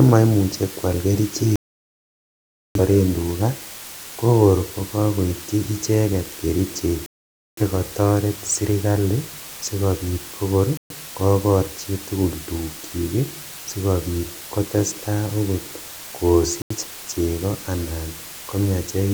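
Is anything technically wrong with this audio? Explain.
Yes. A perfectly even hiss sits under the speech for the whole clip, roughly 15 dB below it, yet the speech itself shows no crunch or grainy distortion. That is low bit depth with dither. The audio is carried on only about 6 bits, and a small random signal was added before each sample was rounded, so the coarse rounding error became steady white noise instead of distortion that follows the speech.

The sound also cuts to silence four times, a digital broadcast dropout each time. The longest hole runs from 1.56 to 2.80 s, about 1.2 s. The next runs from 7.06 to 7.62 s, just after "kokor kokokoitchi icheket kerichek". A short one runs from 10.77 to 10.95 s, between "sirkali sikobit kokor" and "kokor chitugul", and the last runs from 16.62 to 16.76 s, just before "cheko anan". The receiver lost the signal or rejected corrupted frames and muted until clean frames arrived, so whatever was broadcast in those gaps is gone.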